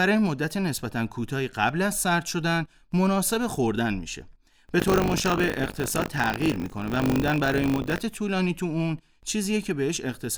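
A robotic 50 Hz rattle runs from 4.78 to 7.98 s: buffer tearing, each buffer hard-splicing in a small slice of audio about 40 ms old.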